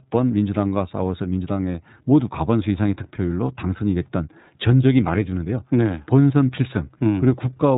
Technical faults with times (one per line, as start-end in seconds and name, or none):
0.00-7.78 iLBC codec